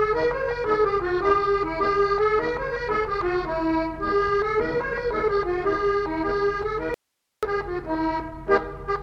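The audio has one clear problem: an audio dropout to a faint residue from 6.94 to 7.43 s, so roughly half a second gone. The sound just cuts out mid-flow and snaps back, nothing like a natural pause or fade, and all that's left in the gap is low hiss sitting about 55 dB under the normal level. That's likely the source signal dropping away while everything downstream stayed live and kept passing its own noise.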